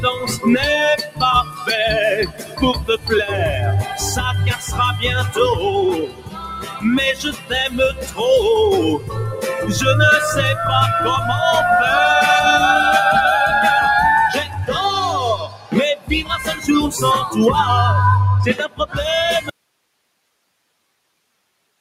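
A noise suppressor built for speech stays active on this sound throughout. It treats steady parts and tails as noise. Level swings by around 15 dB. Onsets pass, but held sound sinks and pumps.

Sound cut by the noise suppressor comes at 1.02–1.66 s, 2.26–3.08 s, 4.56–4.76 s, 6.06–8.21 s, 8.98–9.44 s, 14.44–14.73 s, 15.36–16.68 s and 18.68–19.0 s. Sustained passages drop by about 7 to 15 dB. Decays are chopped short.

At 19.49 s the sound cuts out abruptly and never returns. Only hiss remains, far below the earlier level. This is an audio dropout to a faint residue, likely from the signal being lost while the path after the break stayed live.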